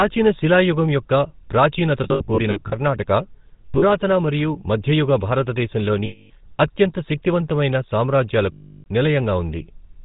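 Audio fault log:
throughout  GSM full-rate codec: The audio carries a plainly audible buzzy, gravelly roughness and nothing above 4 kHz, which fits the 13 kbps full-rate coder. This coder models the vocal tract as a filter and drives it with a sparse, regularly spaced pulse excitation that keeps only one sample in three. The coarse excitation replaces the fine detail of the speech with that grainy texture.
2.04–2.75 s, 3.66–3.83 s, 6.06–6.31 s, 8.52–8.87 s  lost GSM frames: Each span has a rough, metallic ring where the decoder repeats the last good frame's settings. In the first span, about 320 ms is lost, scattered over 680 ms in runs of roughly 70 ms at most. The second loses 100 ms spread over 160 ms. The third and fourth lose 240 ms and 340 ms, and in the fourth the held sound is cut to silence after about a third of a second.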